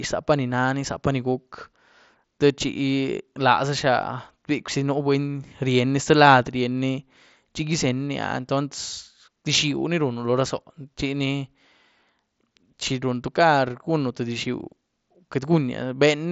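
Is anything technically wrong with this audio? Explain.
No, nothing stood out as technically wrong when listening to this speech.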